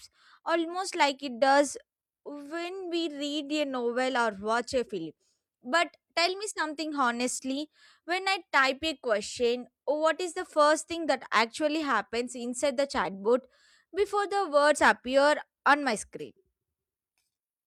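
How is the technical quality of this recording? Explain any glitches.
No glitches turn up anywhere in this recording, so there's nothing technical to explain.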